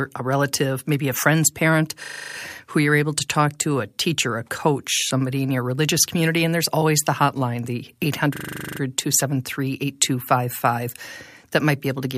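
The system froze twice while the sound hardware kept replaying the same ring buffer, a system hang loop. From 2.04 to 2.36 s, after "maybe a friend's parent", one 40 ms slice repeats eight times, a steady buzz at 25 Hz before "who you're able to" resumes. From 8.36 to 8.8 s, after "always the hotline the", the same 40 ms loop repeats eleven times. The short cycle points to a buffer of about 40 ms. Little or no audio is lost after either stall.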